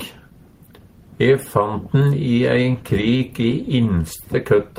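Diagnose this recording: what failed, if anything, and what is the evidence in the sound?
Sound drags and stutters from 2.79 to 3.54 s, nine stalls up to 15 ms: repeated stalls (stutter), late network packets draining the jitter buffer.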